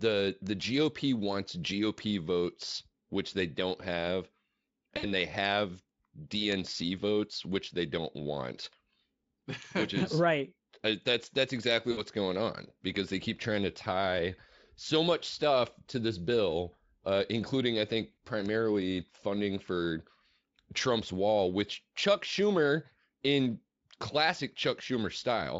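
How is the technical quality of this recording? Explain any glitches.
The recording has two recurring glitches: isolated digital ticks and three brief packet-loss dropouts. The Speex coding itself adds little or no audible damage.

Bit error spikes occur at 0.47, 1.98, 6.52 (just before "votes which they don't") and 18.46 s (after "uh including I think"). Single flipped bits jump one to three samples by a power of two, so each is a sharp broadband tick.

VoIP packet loss concealed by the speech codec hits at 4.97–5.09, 11.91–12.03 and 18.12–18.17 s (after "uh including I think"). About 60 ms went missing each time, which fits several lost frames. The decoder extrapolated and faded its last sound, leaving a weakening stretch that recovers gradually.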